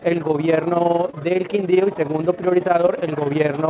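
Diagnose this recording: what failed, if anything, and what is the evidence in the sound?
A fast, rough flutter runs through the whole clip, the level dipping by about 11 dB around twenty times a second. That is overlap-add ripple from the call processing stage: windowed frames were recombined with an overlap that doesn't sum to constant gain, so loudness pulses once per frame.

Brief smears at 1.1 to 1.15 s and 2.87 to 3.04 s are short concealed packet loss on the network. Roughly 40 ms and 20 ms never arrived, and the receiver extended the preceding sound to bridge each gap before blending back, over the band-limited call codec that stops near 4 kHz.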